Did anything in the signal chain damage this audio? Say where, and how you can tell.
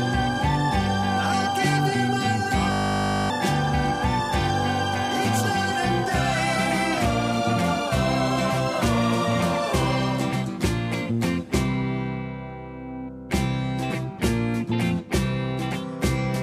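Yes. A system hang loop from 2.72 to 3.3 s points to the driver or buffer stage. The sound stops progressing and becomes a steady buzz at 50 Hz, because a single 20 ms slice repeats exactly, 29 times in a row. While the host or driver stalled, the playback hardware kept cycling the same short ring buffer, so roughly half a second of audio never reached the output and is gone.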